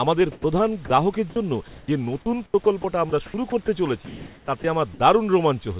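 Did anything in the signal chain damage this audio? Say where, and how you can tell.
Yes. The fault is sound chopped by the voice detector, from 0.32 to 1.88 s and from 2.46 to 5.0 s, on either side of "যে নতুন". In call processing, the speech gates in and out: about 420 ms and 780 ms are replaced by synthetic comfort noise, likely from the sender's voice detector switching repeatedly.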